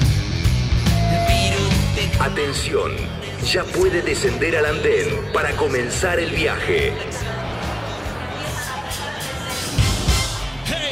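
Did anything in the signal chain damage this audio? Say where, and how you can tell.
No, nothing in the chain can be heard damaging this audio, from the wiring through to playback.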